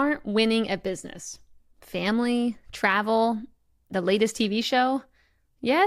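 No technical faults can be heard anywhere in the speech recording.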